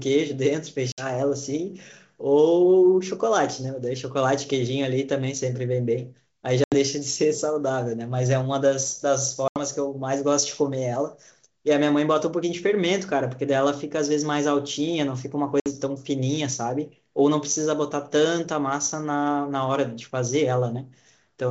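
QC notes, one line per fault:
0.92–1.06 s, 6.64–6.75 s, 9.48–9.59 s and 15.60–15.69 s, packet loss on an ADPCM call: speech drops into abrupt silent holes of 60, 80, 80 and 60 ms, the gap of a few lost packets. Because the decoder's adaptive predictor and step size drift from the sender's during each hole, speech comes back slightly distorted before settling tens of milliseconds later, against otherwise clean 7 kHz G.722 wideband audio.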